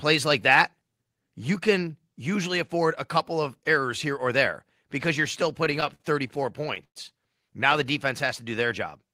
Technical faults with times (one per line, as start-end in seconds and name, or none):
5.49-6.97 repeated stalls (stutter)
8.27-8.68 jitter buffer slow-down